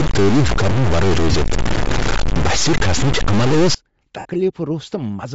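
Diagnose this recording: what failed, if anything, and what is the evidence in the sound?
The speech has a breathy, grainy edge through the whole clip, and the top of the band sounds filled with noise. That points to Bluetooth LC3 compression at a low bitrate, likely around 32 kbps. This is a codec-stage fault.

From the start to 3.75 s there is distortion, and pauses fill with noise. This is likely a stuck bit at the converter or in the sample-format path. One bit ignores the waveform, so values jump by its weight. The noise stops at 3.75 s.

Two brief gaps occur, from 1.32 to 1.34 s and from 4.19 to 4.26 s. These are lost LE Audio frames, a network-stage fault. The decoder reused the last spectrum with random signs. The 22.5 ms and 60 ms gaps fit 7.5 ms frames.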